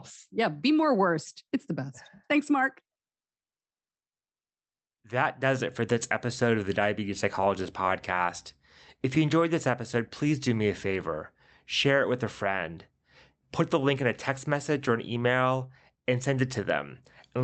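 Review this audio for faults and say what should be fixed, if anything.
Clock drift between sender and receiver runs through the whole speech clip. The sender's clock is slow by roughly 3 percent, so the receiver's jitter buffer keeps draining and has to be topped up. The effect is a faint, recurring unevenness in pacing rather than any single obvious glitch. On a waveform the drift itself is invisible, and only its side effects show, as small, irregular seams. Locking both ends to a common clock or running adaptive resampling at the receiver would prevent this.

Repeated timing corrections run from 0.34 s to 17.39 s. Because the sender is slow, every edit goes the same way: short pieces are repeated, stretching the speech to about 98 percent speed and adding around 0.4 s overall. Where a repeat is noticeable, it comes across as a slight hiccup or a momentary drag in tempo, at uneven intervals. 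A waveform shows brief duplicated cycles at splice points. A spectrogram shows tiny horizontal smears where a frame is repeated, below the 8 kHz ceiling of the Opus call codec. Replacing discrete repeats with smooth time-stretching in the jitter buffer would hide these corrections.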